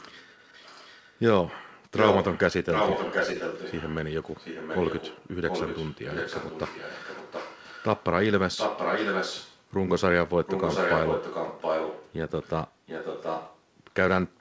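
A delayed second copy of the speech trails the talker by about 0.73 s, an echo leak, likely a far-end loudspeaker whose echo canceller let its own mic pickup back through. It's faint from 0.39 to 1.14 s, as loud as the speech itself from 1.96 to 2.4 s, then moderate from 2.71 to 8.04, 8.56 to 9.62, 10.46 to 12.5 and 12.86 to 13.59 s, all inside a band topping out at 8 kHz, consistent with G.722.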